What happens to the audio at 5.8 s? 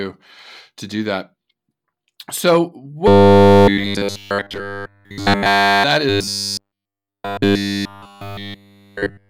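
Robotic sound from repeated short buffers is just ending at 5.84 s, after running from 3.08 s. Throughout that span essentially every slice of audio is a repeat. The likely cause is a playback buffer starved of fresh data, looping its last 10 ms instead. That fixed loop imposes a rigid 100 Hz metallic buzz that loosely tracks the speech. A waveform shows identical 10 ms cycles, and a spectrogram shows evenly spaced harmonic lines at 100 Hz multiples that stop abruptly there.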